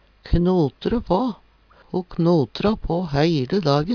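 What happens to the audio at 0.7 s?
Nothing goes wrong at 0.7 s; the audio plays through that moment intact, with no dropout, click or other fault.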